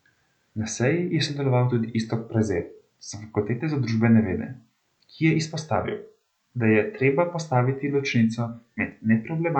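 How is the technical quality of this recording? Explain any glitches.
No technical faults are audible.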